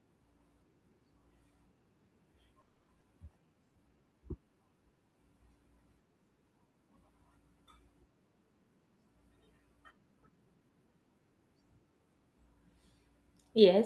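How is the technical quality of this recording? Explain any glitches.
The recording has three network glitches packed into the span from 2.6 to 4.7 seconds. The sound comes through a call codec path whose top end stops near 12 kHz.

At 2.61 to 2.90 s there is a call audio freeze. The last sound carries on as a buzz that fades, and the final 130 ms or so is silent. This is likely a late burst of packets that left the jitter buffer empty. When the audio resumes, it picks up where it stopped. Nothing is lost, but everything after it now plays 270 ms later. That is what separates it from a dropout.

At 3.00 to 3.03 s a skip ahead follows. Roughly a fifth of a second of audio is dropped, and the two sides are joined with only a 10 ms fill. Unlike the freeze, the content is missing rather than delayed. The jump sounds like an abrupt splice, not a pause.

From 3.42 to 4.70 s there is a jitter buffer slow-down. 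The receiver repeats single pitch periods to rebuild its reserve, which adds 179 ms and plays the audio at 87 percent speed. The pitch stays the same, while sounds are drawn out. This distinguishes it from a tape-style slowdown, where the pitch would drop.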